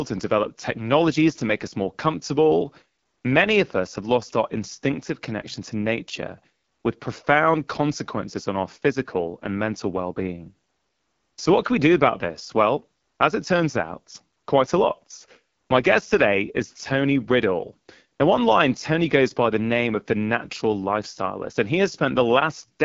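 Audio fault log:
Throughout, AMR wideband (HD Voice) codec: the speech sounds plainly rough and raspy. The codec rebuilds it from pulses driving a vocal-tract model up to 6.4 kHz and fills the band above with shaped noise, with nothing past 7.4 kHz. That harshness points to a low rate, around 8.85 kbit/s.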